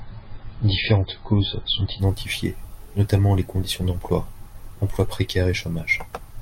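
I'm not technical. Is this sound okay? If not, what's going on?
No. This is an adaptive stream starting at a low bitrate: the player began on a cheap, heavily squeezed version of the speech so it could start playing right away, then switched to a much better version once it had checked the connection. For the first 2.0 seconds the speech sounds dull and muffled, with nothing above about 5.1 kHz and a watery, processed edge. At 2.0 s the clarity jumps up abruptly, with no break in the sound.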